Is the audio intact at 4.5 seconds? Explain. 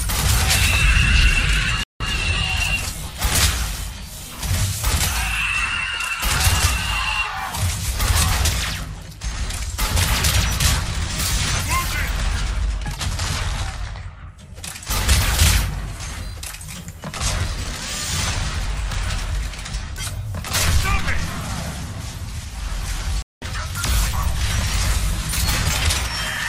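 Yes, the audio is intact at 4.5 seconds, with no dropout, click, distortion or other fault at that moment.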